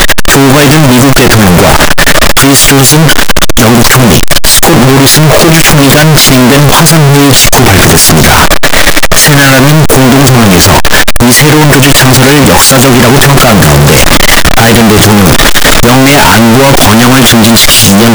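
Throughout, the audio is a harsh, very loud distortion in which background noise is as loud as everything else: float read as integer, likely 32-bit float samples decoded as 32-bit integers. The waveform sits near-square at an almost fixed, high level, and the spectrogram is flooded with broadband energy.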